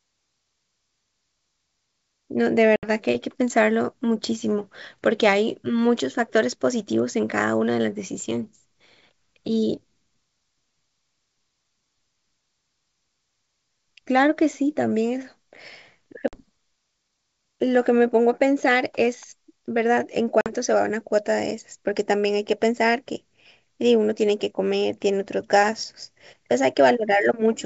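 At 2.76 to 2.90 s, 16.28 to 16.42 s and 20.41 to 20.52 s, packet loss on an ADPCM call cuts hard silent holes of about 70, 50 and 50 ms into the G.722 wideband speech. Unlike a plain dropout, each gap ends with slightly distorted speech that takes tens of milliseconds to settle, because the decoder's predictor and step size lost step with the sender's.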